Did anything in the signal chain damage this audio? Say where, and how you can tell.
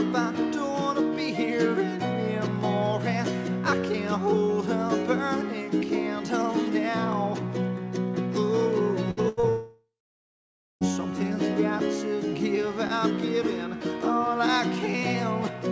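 Yes, at the network stage. Two bursts of packet loss fall at 9.11 to 9.20 s and 9.29 to 9.40 s. In each, the receiver bridged the gap by carrying the last sound on, as a held buzz or a hiss, and letting it fade. It filled 58 ms and then 83 ms, while 60 ms and 90 ms of the original went missing. The sound resumes further on each time, and the frequency ceiling at 8 kHz fits a 64 kbit/s G.722 call path.

Short concealed packet loss follows immediately at 9.40 to 9.46 s, where about 30 ms never reached the decoder in time. The receiver synthesised a 30 ms continuation of the preceding sound and cross-faded back into real audio. The result is a brief smear or wobble right after the second burst, and because the gap is so short, any brief transient falling in it can simply disappear.

A long network dropout runs from 9.49 to 10.84 s. The last sound is stretched into a fading buzz or hiss. Then about 900 ms of the stretch is silence before audio returns. 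Roughly 1.3 s was filled in, and 1.32 s of the original never plays. The cause is likely a stall in packet delivery rather than anything at the source, because the audio resumes further on with that stretch skipped, not delayed.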